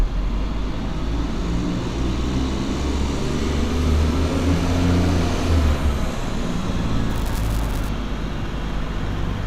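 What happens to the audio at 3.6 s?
At 3.6 s the sound plays through intact, with no dropout, click, distortion or other fault at that moment.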